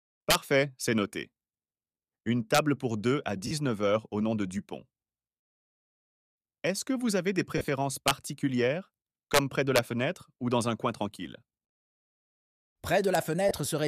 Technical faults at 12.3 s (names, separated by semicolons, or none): none